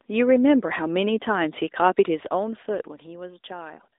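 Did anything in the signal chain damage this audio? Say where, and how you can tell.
Yes. AMR narrowband mobile codec damage runs through the whole clip, at the codec stage. Nothing passes above 3.8 kHz, the band sits at roughly 300 Hz to 3.7 kHz, and the plainly buzzy, synthetic texture points to a 10.2 kbps mode rebuilding speech from sparse pulses.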